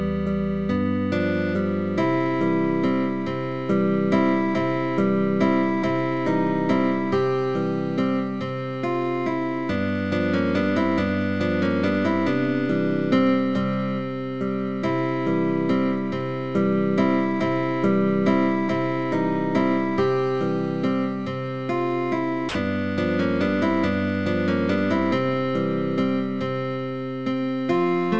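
Sound dropped by the voice detector, from 22.49 to 22.55 s: for about 60 ms the sound gives way to a flat, steady noise bed before it resumes. The likely cause is the sender's voice detector briefly judging the material to be background and pausing transmission, so the receiver filled the gap with generated comfort noise. The clip comes through a call path with nothing above 8 kHz, which fits a wideband codec such as G.722.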